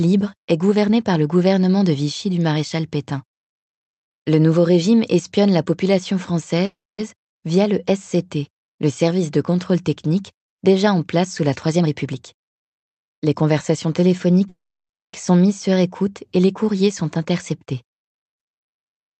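Speech, heard over a call link that tops out near 8 kHz. Two call audio freezes occur, likely from delayed packets draining the jitter buffer. After "régime espionne la population", 6.65 to 7.00 s holds a fading tail and then silence before "via le". A longer one at 14.48 to 15.15 s precedes "sont mises". Nothing is lost. Jitter buffer speed-up also speeds up the speech at unchanged pitch, 11% faster from 11.68 to 14.48 s and 4% faster from 16.87 to 19.17 s, as small pitch-period slices are trimmed.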